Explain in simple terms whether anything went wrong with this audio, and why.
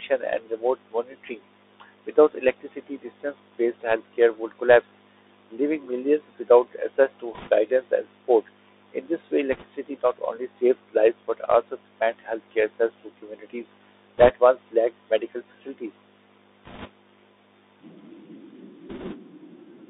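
The whole recording went through a Bluetooth CVSD headset codec, the narrow phone-quality format headsets use. It keeps only about 300 Hz to 3.7 kHz, so the speech sounds thin and boxy, with scratchy s sounds and a grainy hiss underneath.

Bit errors on a Bluetooth voice link also hit five brief moments, where a few percent of the transmitted bits arrived flipped. This adds a short rushing crackle rather than loud clicks, at 7.34 s after "millions without access to", 9.52 s after "this way", 14.18 s after "healthcare access to communities", 16.65 s and 18.89 s.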